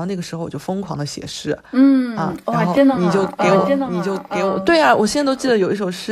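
A doubled audio track from 2.77 to 5.51 s: a second copy trails by roughly a second, about 5 dB quieter, likely a slower capture path mixed back in.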